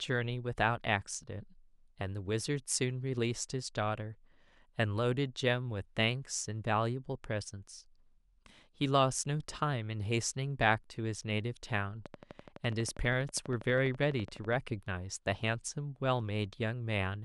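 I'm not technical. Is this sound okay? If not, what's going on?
No. There's a train of clicks from 12.06 to 14.54 s: around thirty sharp ticks, evenly spaced at about 12 per second, audible over the speech and in its gaps. The likely cause is electrical interference from nearby equipment or a faulty connection or power supply.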